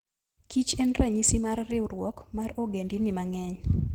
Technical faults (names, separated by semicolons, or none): Opus compression